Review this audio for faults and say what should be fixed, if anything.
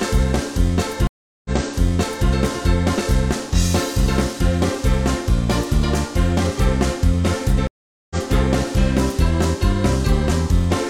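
Stream reconnect at 1.07–2.28 s and 7.67–8.16 s: the connection dropped and a fresh decoder restarted mid-stream. The first gap is 377 ms of silence, then playback resumes 836 ms earlier; the second is 431 ms, resuming about half a second later. Prevent it with a larger network buffer and seamless, position-aware reconnection.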